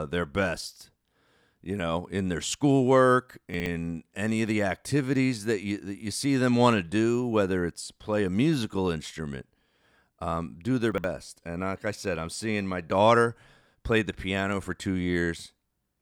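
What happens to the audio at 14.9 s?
Around 14.9 s the speech carries on intact, with no dropout, click, distortion or other fault to be heard at that point.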